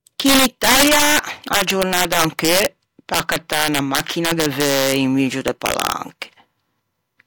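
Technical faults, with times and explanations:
Throughout, integer overflow: the speech was pushed about 4 dB past the largest value the integer format can hold, and instead of being limited at full scale, each overshooting sample wrapped around to the opposite extreme. Only a small share of samples, around one or two percent, go over, so the damage lands on the loudest peaks, where the waveform leaps across its full range and produces harsh, violent cracks far sharper than ordinary clipping.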